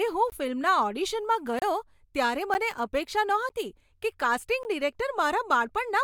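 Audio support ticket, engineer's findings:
Block of digital silence: hard dropouts to silence at 0.30–0.32 s, 1.59–1.62 s, 2.54 s, 3.49 s and 4.63 s, 10 to 30 ms each, with no fade. Probably the output buffer not getting filled in time.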